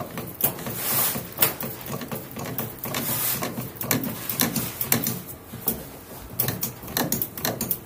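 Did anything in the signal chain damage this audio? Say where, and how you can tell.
Yes. At 4.40 s there is a brief stutter, a click where about 13 ms of audio plays twice. That is the signature of overlapping chunks at the buffer or chunked-processing stage. The audio was handled in 2.5 s blocks, and at this join the next block began before the previous one ended, so the overlap was played again. A dropout would leave a gap instead, and a clipping click would not repeat any material.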